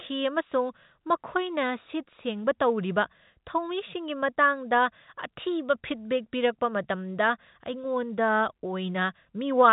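No faults can be heard.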